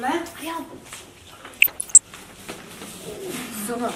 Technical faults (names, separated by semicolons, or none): DAB burbling